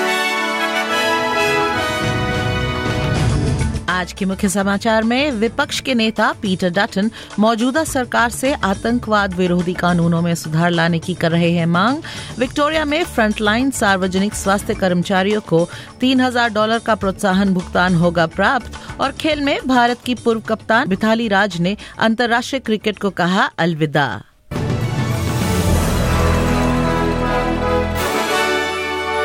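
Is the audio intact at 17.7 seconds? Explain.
Yes, the audio at 17.7 seconds is intact, with no dropout, click, distortion or other fault at that moment.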